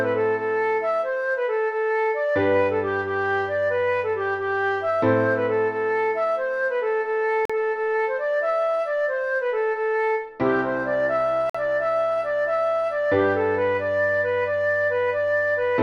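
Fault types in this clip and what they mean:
Gap between stream segments: the timestamps of consecutive stream segments fail to meet, leaving a short interval that the player covers with digital silence, so nothing is dropped but the timeline is stretched. Here two hard-edged holes cut into the sound, at 7.45 s lasting 42 ms and at 11.50 s lasting about 50 ms. Their 4-second spacing matches the segment length, placing each hole exactly on a segment boundary.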